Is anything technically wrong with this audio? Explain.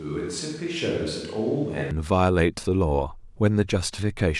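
Yes. From the start until 1.91 s, the signal likely comes from a microphone far from the talker, a switch to a distant microphone. It captures more of the room, so the speech sounds hollow, bass-light and about 5 dB quieter, with room noise roughly 30 dB below it, until close pickup abruptly returns.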